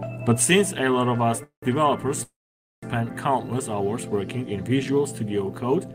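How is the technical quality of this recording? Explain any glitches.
The recording has two call audio freezes, at 1.43 to 1.65 s and 2.23 to 2.86 s. The likely cause is packets held up in transit, which left the jitter buffer empty. The receiver filled each wait by stretching the last sound into a fading buzz or hiss that drops to silence. The first fill lasts about 0.19 s, with 0.12 s of it silent, and the second lasts about 0.59 s, with 0.52 s silent. Nothing is lost: the audio resumes where it stopped, just later.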